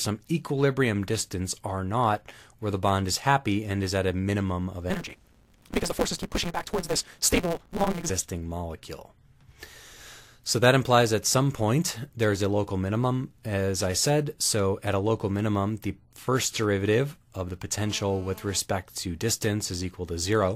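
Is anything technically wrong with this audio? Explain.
Yes, there are two separate faults.

From 4.90 to 8.11 s there is a block size mismatch (truncated). One processing stage hands over longer blocks than the next stage takes in, so the tail of every block is discarded. This fits a 256-sample read. Chopping each block leaves a buzz at the block rate of 172 Hz, and because audio is dropped, the sound runs about 1.88 times faster while its timbre stays the same.

From 17.79 to 18.60 s there is GSM phone buzz. A nearby 2G handset on a call transmits in radio bursts about 217 times a second, and the audio circuitry rectifies those pulses into the signal. The result is a hard, raspy 217 Hz buzz full of harmonics, about 23 dB below the audio, nearly steady and unrelated to the sound it sits on.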